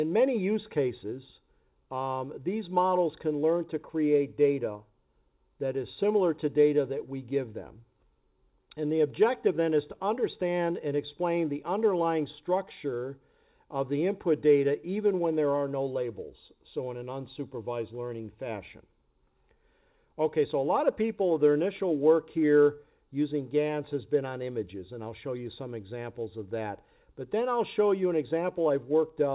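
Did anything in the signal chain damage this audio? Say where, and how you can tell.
No, nothing in the chain damaged this audio; it went through an ordinary call path with a G.711 mu-law codec at 64 kbps, and the missing content above 4 kHz is just that codec's normal ceiling.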